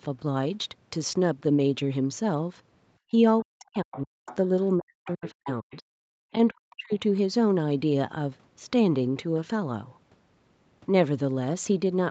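Speech recorded over a call, band-limited to about 8 kHz. From 3.11 to 5.86 s and again from 6.34 to 6.92 s, the talker's own voice is pushed down by around 40 dB in pieces, adding up to roughly 1.5 s and 0.4 s. This is speech suppressed in double talk, likely from the echo canceller muting both voices at once, and it is set apart from ordinary dropouts by coinciding with the other side talking. That other voice is heard in the other side's voice leaking through at 3.91–4.36 s and 5.06–5.76 s, roughly 20 dB below the talker. There is also a fainter trace at 6.71–6.75 s, around 35 dB down. It is a distinct second voice, not a reverberant copy of the talker. At 6.15–6.21 s the background gated by the echo canceller drops about 40 dB for roughly 70 ms. The room sound dips out and returns when the canceller lets go.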